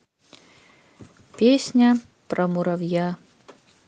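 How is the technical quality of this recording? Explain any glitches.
No glitches or faults can be heard in this recording.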